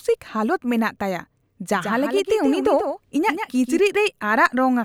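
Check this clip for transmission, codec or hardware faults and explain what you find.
One fault is present. A doubled audio track runs from 1.73 to 3.79 s: a second copy of the speech sits roughly 150 ms behind the original, about 5 dB quieter. The likely cause is the same signal reaching the mix twice, once through a slower path or an edit that left two offset copies. The copy is full-band and dry, with no decay or room colour, so the speech sounds stuttered and smeared. It switches on and off abruptly.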